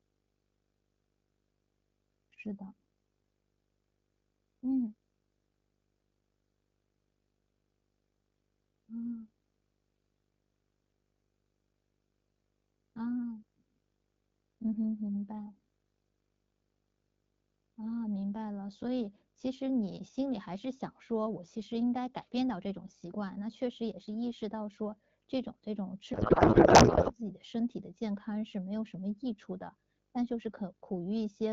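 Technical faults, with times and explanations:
Throughout, video or display buzz: a 50 Hz buzz from the picture's field rate sits under the speech with a layer of hash above it, plus a thin, very high tone at 15.6 kHz from the line scan. The buzz runs about 40 dB below the speech. This is the signature of a screen or video cable coupling its scanning currents into the audio wiring, so the interference follows the display's timing rather than anything in the sound.
26.13 to 27.14 s, codec payload misread: for about one second the speech is replaced by garbled noise and warble that barely tracks it. The speech is carried by the AMR wideband (HD Voice) codec at 12.65 kbit/s. Here the receiving side unpacks octet-aligned AMR frames as if they were bandwidth-efficient. Every field is shifted from where the decoder expects it, so it builds sound from scrambled parameters until both sides agree on the packing again.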